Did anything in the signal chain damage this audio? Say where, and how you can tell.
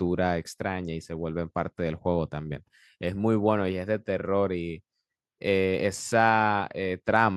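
No, nothing in the chain audibly damaged this recording.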